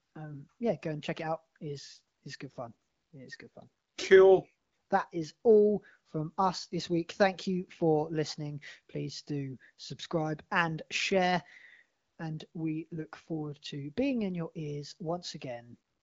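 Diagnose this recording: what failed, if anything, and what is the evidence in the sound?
Nothing failed: the recording passes through its HD Voice (AMR-WB) path at a rate that keeps speech clear, and no stage shows a fault in the sound.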